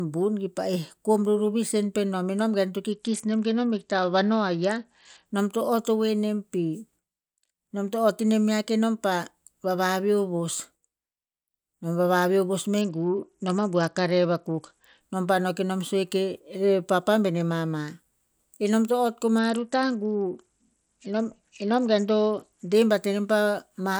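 Bluetooth SBC bit pool drops at 2.92–5.26 s, 12.81–15.01 s and 19.39–22.73 s dull the treble and add gritty noise to the speech. Link congestion starved the codec, likely down to a bit pool near 9 at about 72 kbps, leaving upper sub-bands with few or no bits.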